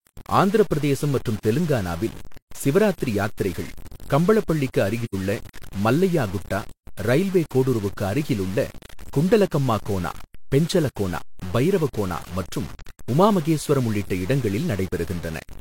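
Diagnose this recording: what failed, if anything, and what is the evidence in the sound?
Low bit depth without dither runs through the whole recording. The speech carries grainy distortion that moves with the sound, about 20 dB below the signal, and quiet syllables turn gritty. The likely cause is truncation at sample-format conversion to roughly a 6-bit word, with no dither.

AAC frame loss with muting appears at the codec stage from 5.05 to 5.15 s, just after "தெலங்கானாவில் சிவராத்திரி யாத்திரைகள் கம்பளப்பள்ளிக்கு", and from 12.79 to 12.87 s, between "கோனா பெஞ்சலகோனா பைரவகோனா மற்றும்" and "உமா மகேஸ்வரம் உள்ளிட்ட". The gaps last 85 ms and 43 ms, which fits two lost frames and one. The decoder zeroed their spectrum, so the overlapping windows fade the sound out and back in, leaving a soft-edged hole and a brief dip.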